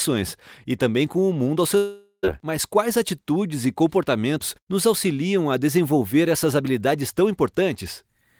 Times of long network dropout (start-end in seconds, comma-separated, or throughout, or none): 1.77-2.25